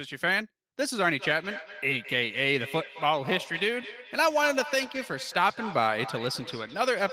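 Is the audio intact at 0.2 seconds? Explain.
Yes, at 0.2 s the speech plays through cleanly with no dropout, click, distortion or other fault audible at that moment.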